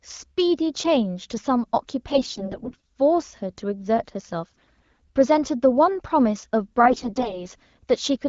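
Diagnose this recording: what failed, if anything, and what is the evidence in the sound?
Network-stage AMR bit errors flipped weakly protected frame bits, misplacing excitation pulses: speech turns hoarse and gargly at 2.11–2.79, 4.57–4.98 and 6.84–7.46 s.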